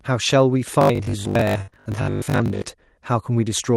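From 0.81 to 2.70 s the speech turns into a rigid metallic drone at 50 Hz. This is robotic sound from repeated short buffers, likely from about half the audio being replaced by 20 ms repeats. A spectrogram shows evenly spaced 50 Hz harmonic stripes.

From 1.61 to 1.70 s a burst of packet loss removes about 60 ms. The last sound is held for 61 ms and fades, appearing as a smeared, decaying band before the audio jumps forward.

Right after, from 1.70 to 1.74 s, short concealed packet loss fills a 20 ms hole with 23 ms of extrapolated sound. It is heard as a brief wobble, a tiny blurred patch in the spectrogram.

At 2.54 to 2.56 s one packet was lost and rebuilt from error correction. The 20 ms copy sounds rougher and noisier.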